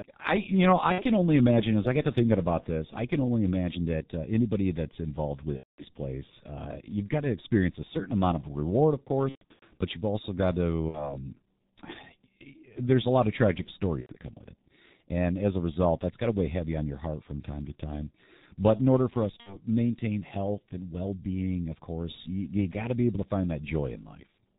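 G.723.1 codec damage runs through the whole speech clip. At about 6.3 kbit/s the codec keeps nothing above 4 kHz and refreshes its model of the voice only every 30 ms, so the speech comes across heavily muffled and hoarse, with consonants smeared together rather than crisp. The damage is heavy and constant.

VoIP packet loss concealed by the speech codec interrupts the audio six times:
at 0.92 s, for about 60 ms;
at 5.57 s, just after "uh anybody that's involved", for about 210 ms;
from 9.29 to 9.77 s, where about 300 ms of gaps are scattered across nearly half a second, the longest lasting 120 ms;
at 10.88 s, after "but you've also got", for 60 ms;
at 14.01 s, for 90 ms;
at 19.40 s, between "in order for us" and "maintain health and well", for 60 ms.

Each gap fits whole 30 ms frames going missing. The decoder fills the holes by repeating its last pitch and filter while lowering the level. 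The result is a stretched buzzy tone or coloured noise that fades, and the sound stays weak or distorted briefly after the audio resumes.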